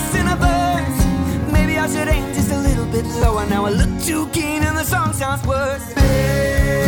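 At about 3.22 s there's a quick case of chunks out of order. One tiny slice of audio, roughly 5.8 ms long, turned up one chunk late, so it plays after the piece that should have followed it. Nothing actually goes missing, but the swap leaves three hard joins packed into a dozen milliseconds, and you hear it as a brief stutter where the sound jumbles for an instant.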